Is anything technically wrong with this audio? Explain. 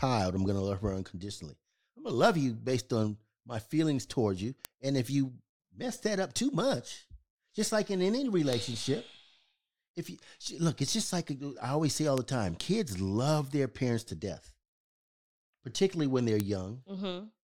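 Yes, the speech carries four bit error spikes: sharp, broadband ticks at 4.65 s (after "my feelings towards you"), 8.53 s, 12.18 s (after "I always say all") and 16.40 s (after "particularly when they're"). In each, a flipped bit throws one or a few samples a power of two off and back, reaching about -9 or -15 dBFS. The ticks are unrelated to the speech.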